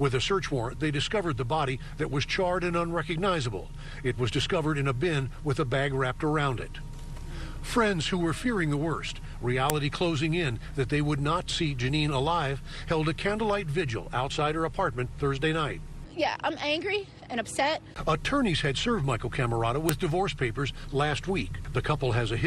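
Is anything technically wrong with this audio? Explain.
Yes. At 9.70 s and again at 19.89 s, a file header played as audio: the audio was joined from separate WAV pieces whose headers were left in, so those few dozen bytes were read as samples. Each one lands as a sharp, loud click at the start of a new piece, regardless of the surrounding sound.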